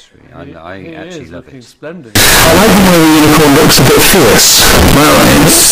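From 2.15 s to the end, the audio turns into a nearly square, buzzing wave at an almost constant, very high level, very loud and harsh, with the background noise as loud as the main sound, though its pitch can still be followed. This is float read as integer: the likely cause is 32-bit float samples being read as 32-bit integers, so each value comes from the sign and exponent bits rather than the true amplitude.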